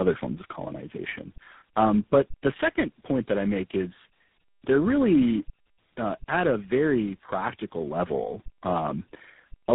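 Throughout, the speech carries tandem speech coding: it sounds like it passed through roughly three low-rate speech codecs in a row, each re-coding the previous one's damage. Nothing survives above 3.8 kHz, and it is rougher, more muffled and more warbly than any single codec would make it.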